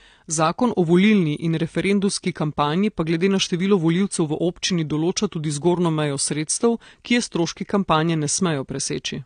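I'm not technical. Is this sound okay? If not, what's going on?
No. Throughout the clip the speech sounds dull and smeared, with a watery, fizzy edge on hissy sounds, and nothing is heard above about 9.6 kHz. That is the signature of heavy AAC compression, likely a low-quality setting that discards high frequencies and fine detail.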